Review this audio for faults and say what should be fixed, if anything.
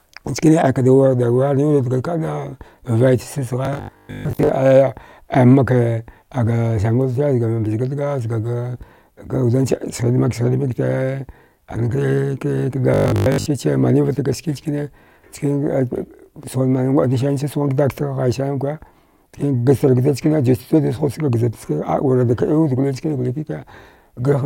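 Robotic sound from repeated short buffers appears twice in the speech, from 3.65 to 4.49 s and from 12.94 to 13.46 s, just before "manivat ga ski". Both passages carry a rigid, metallic buzz at 50 Hz, which fits a 20 ms segment being replayed. The likely cause is audio arriving too seldom, so the last buffer is looped and most of the real signal in those spans is skipped. Preventing this means enlarging the jitter or playback buffer so that incoming audio never runs dry.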